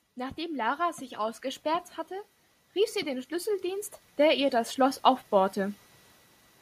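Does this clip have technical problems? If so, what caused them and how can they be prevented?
Yes. The automatic gain control judged the input too quiet and raised its gain twice, so the automatic gain rising shows as the whole sound, speech and background together, swelling upward. The first rise runs from 0.14 to 1.96 s and lifts the level by about 6 dB; the second, slower one runs from 2.73 to 5.85 s and adds about 9 dB. To prevent it, disable automatic gain and set a fixed input level before recording.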